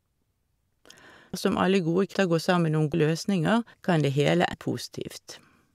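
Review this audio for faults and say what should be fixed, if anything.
Audio missing between chunks at 1.34, 2.94 and 4.54 s. The speech jumps ahead abruptly, losing about a fifth of a second each time. Likely cause: recording in 1-second chunks, dropping audio at each handover.

Prevention: buffer continuously across chunk boundaries so no samples are lost during handover.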